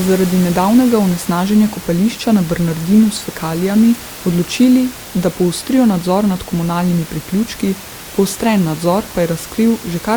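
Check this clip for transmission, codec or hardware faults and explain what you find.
No transmission, codec or hardware faults.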